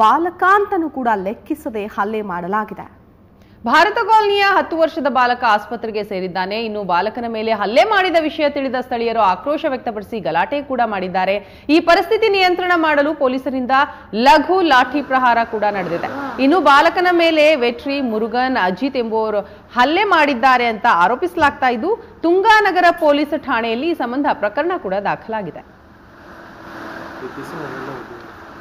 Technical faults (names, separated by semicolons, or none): hard clipping